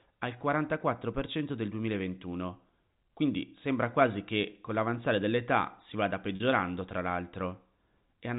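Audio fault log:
4.50–4.52 s and 6.36–6.40 s, packet loss with pitch repetition: two gaps in the speech, about 20 ms and 40 ms long, which fits the loss of one and then two 20 ms packets. The receiver bridged each gap by replaying the last pitch cycle and fading it down, so the sound holds briefly with a slight buzz rather than dropping out. On a spectrogram the harmonics run flat and unchanging across the gap. On the waveform identical cycles repeat with shrinking amplitude. The narrow telephone band of the G.711 coding stays intact on either side.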